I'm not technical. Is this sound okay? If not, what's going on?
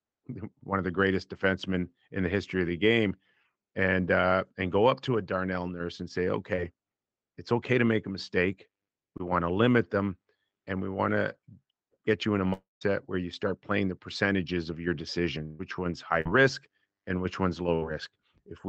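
No, there are a few brief glitches, all from parts of the call that arrived late or got lost on the way.

Short concealed packet loss happens at 6.55, 9.18 and 16.21 seconds. Each time, a sliver of sound lasting a few hundredths of a second (about 0.04 s at 16.21) never arrived. The receiving end covered the gap by briefly stretching whatever sound came just before it. What you hear is a tiny smear or wobble, and a quick sound can go missing.

The long network dropout runs from 12.53 to 12.83 seconds. It is likely caused by the connection stalling for a moment. About 0.28 s of audio is lost. The last sound trails off as a fading buzz or hiss, and about 0.16 s of that stretch is silent. Then the audio picks up again with that piece gone. The silence is what sets it apart from the other glitches.

Bursts of packet loss occur at 15.45 to 15.61 seconds and 17.75 to 17.83 seconds, costing about 0.14 s and 0.06 s. 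Several pieces in a row went missing. The last sound is held as a buzz or hiss that fades as the gap goes on, then the audio resumes further along. These bursts are longer than the short losses, but unlike the dropout they never fall fully silent.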